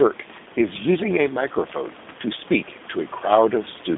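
A G.729 codec on the line, of the G.729A kind, sits across the whole of this short speech clip. It rebuilds each 10 ms frame from a vocal tract filter, a pitch predictor and a handful of pulses, and the plainly audible roughness fits an 8 kbit/s stream. The band is squeezed to roughly 200 Hz to 3.6 kHz, with nothing above 3.7 kHz, so sibilants lose their edge. The speech takes on a buzzy, synthetic grain, and the room noise, about 20 dB below the speech, picks up a warble.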